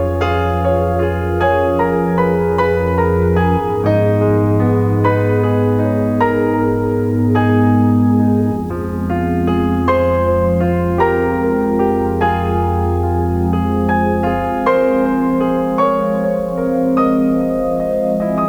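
From start to finish the audio carries a grainy, gritty distortion that moves with the sound itself, roughening quiet passages and fading in and out with the level. Low bit depth without dither is the likely cause: the signal was rounded to very few steps, which fits 8-bit resolution, so the error tracks the waveform and lands roughly 35 dB below the signal.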